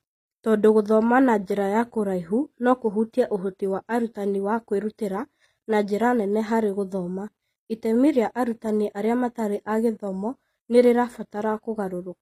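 HE-AAC compression runs throughout the speech, audibly damaging it. The treble stops at about 15.4 kHz and sibilants sound gritty and metallic, likely because the upper band is rebuilt by spectral band replication from copied lower bands, which points to roughly 24 kbps.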